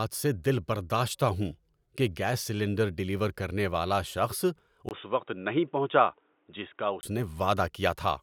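At 4.89 s a short gap of about 20 ms opens, and the speech comes back dull and boxy, with nothing above 3.8 kHz and a faint new noise underneath, at roughly the same loudness. At 7.03 s the full band returns. This is likely an input switched to a poorer device. A plain filter or codec bandwidth drop would not explain the sudden dropout, the changed tone or the different background noise arriving together.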